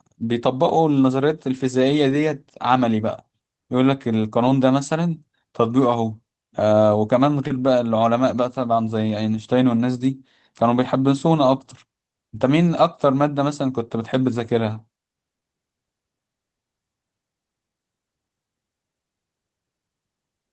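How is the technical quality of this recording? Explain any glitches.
The speech has come through a call path with a few dropouts that were patched over. The band tops out around 8 kHz, which fits Opus running at something like 24 kbps.

You'll hear five spots of lost packets rebuilt from error correction, at about 2.09 s, 4.43 s, 7.49 s, 9.31 s and 11.69 s. Each rebuilt stretch lasts 20 to 40 ms. The next packet carried a rough low-bitrate copy, so nothing drops out, but those moments sound grainier and noisier.

There are two short concealed packet losses, at about 7.47 s and 15.39 s, each around 20 ms. No copy arrived in time, so the decoder stretched the preceding sound to fill the gap and then blended back in. Listen for a quick smear or wobble there.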